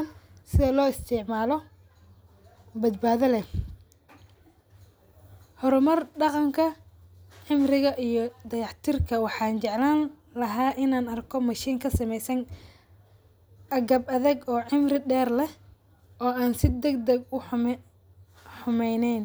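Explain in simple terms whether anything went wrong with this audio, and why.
Nothing went wrong here.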